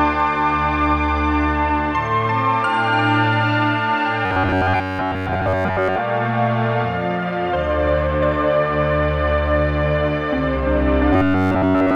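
From 4.26 to 5.99 s, and from 11.13 s to the end, a metallic buzz near 94 Hz appears. This is robotic sound from repeated short buffers, likely looping 11 ms chunks.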